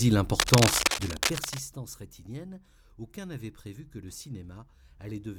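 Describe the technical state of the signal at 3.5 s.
At 3.5 s the signal is intact, with no technical fault present at that moment.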